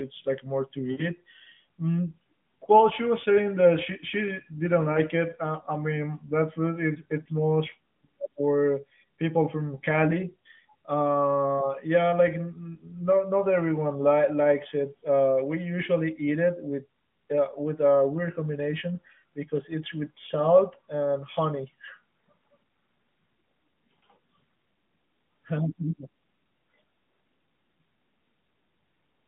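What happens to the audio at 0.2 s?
Nothing goes wrong at 0.2 s: the speech passes through intact, with only the narrow telephone band of the AMR narrowband mobile codec audible there.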